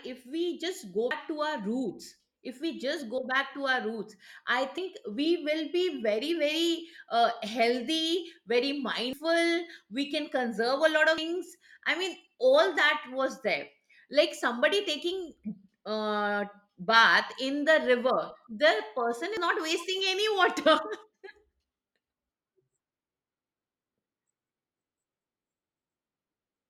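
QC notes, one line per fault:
1.11, 4.78, 9.13, 11.18 and 19.37 s: dropped buffer (overrun). At each point the speech jumps ahead with no silence, as after "if we just" and "to our roots I", losing roughly a tenth to a third of a second. Likely samples were overwritten before being read. The waveform shows a sudden step with no gap, and the spectrogram a thin broadband vertical line.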